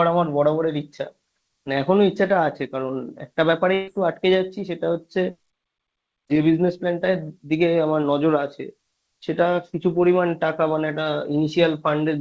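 A burst of packet loss hits this speech recording between 3.74 and 3.89 s. A short run of packets was lost or arrived too late to play, so the receiver concealed the gap by stretching the last sound for about 133 ms and fading it down instead of leaving silence. The result is a brief smeared, decaying tail where real speech should be, and when the audio resumes, about 140 ms of the original is gone. Throughout, nothing is heard above 8 kHz, which fits the band limit of a wideband call codec such as G.722.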